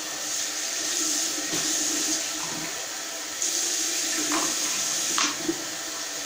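Nothing technically wrong turns up in this short recording of sounds, so there's no fault here to point to.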